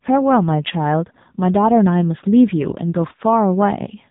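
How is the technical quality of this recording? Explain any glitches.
Quality is poor: the whole recording has passed through an AMR narrowband mobile codec with heavy damage. Throughout, nothing above about 3.8 kHz survives, and the speech is rebuilt from a vocal-tract model excited by sparse pulses, so it sounds muffled, buzzy and synthetic. The thinness of that excitation fits a low AMR-NB mode of about 6.7 kbps.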